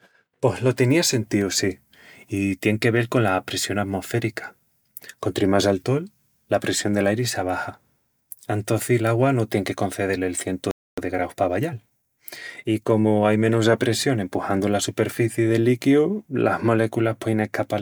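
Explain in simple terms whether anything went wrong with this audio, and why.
Something did go wrong, right in the middle of the speech. At 10.71 s, just after "el cientu", there's a playback stall: the sound simply cuts out for about a quarter of a second (roughly 0.26 s) before picking up again at 10.98 s. That kind of gap is what you hear when the player runs dry, most likely because it ran out of incoming data or its processing got held up for a moment, so nothing reached the output.

Right after that, from 10.98 s to 13.62 s, you get time-compressed catch-up. The player has fallen behind, so it quietly snips out tiny slices of audio and blends the joins to make up the lost time. The speech plays about 1.1 times faster but keeps its normal pitch, so it sounds a little rushed. Things settle back to normal pace by "apressión empuxandu la superficii".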